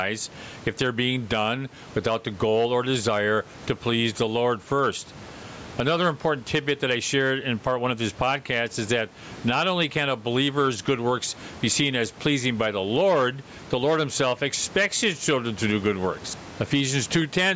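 Gain pumping runs through the whole speech recording: the gain is pulled down on each loud sound, with a level swing of around 15 dB. The likely cause is input gain set far too high, with a fast limiter clamping it on peaks. On a waveform the speech bursts look flattened and even; a spectrogram shows the room noise, normally about 32 dB below the speech, beneath a band that stops at 8 kHz.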